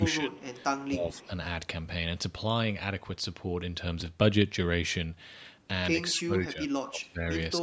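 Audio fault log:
0.00–0.39 s, 0.88–1.30 s and 6.15–7.24 s, speech suppressed in double talk: the talker dips in level each time, by about 10 dB in the first two spots and much harder, about 20 dB, across roughly a second in the last. That pumping squash is likely the echo canceller hearing both ends at once, failing to tell the near talker from the loudspeaker return, and ducking everything to be safe.
4.01 s and 5.46 s, chunks out of order: two tiny garbled moments, each a slip of about 5.8 ms where a sliver of audio plays one slot late, after material that should have come after it. Nothing goes missing, but swapping neighbours leaves three hard joins at each spot rather than a gap.
6.17–6.21 s, echo leak: a brief faint ghost, sitting about 25 dB below the speech, of what sounds like the voice arriving 222 ms late. It's likely loudspeaker sound picked up by the far end's mic and not fully cancelled, then sent back. 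It's short enough to register as a scrap of echo rather than a clear repeat, and it lands inside the heavy ducking stretch.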